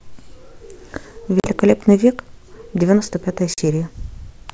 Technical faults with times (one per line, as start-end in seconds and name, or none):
1.40-1.48 packet loss on an ADPCM call
3.54-3.59 packet loss on an ADPCM call